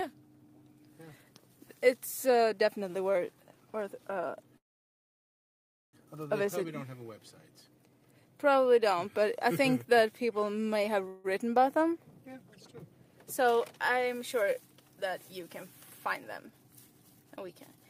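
At 4.57 s the audio stalls: the last sound stretches on for a moment, then drops into near silence for about 1.3 s before resuming at 5.95 s exactly where it stopped. At 11.08 s a shorter stall of 0.16 s is filled entirely by a smeared buzz of the preceding sound. Both are call audio freezes, likely from packets arriving late and the jitter buffer running dry. Nothing is lost, but each adds delay.

From 16.49 to 17.49 s the sound hurries, playing about 10% fast with no change in pitch. This is a jitter buffer speed-up. The receiver trims many tiny pitch-length slices in succession, removing about a tenth of a second in total, to bring its backlog down.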